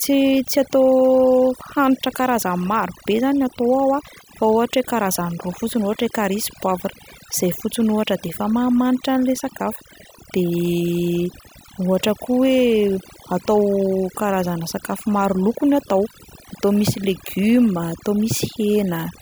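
Overdone noise removal runs through the whole speech clip. The noise reduction was set too strong. Frequency bands near the noise estimate are pushed down or cut entirely. Quiet parts of the voice vanish with them. Pauses become near silence with twinkling specks.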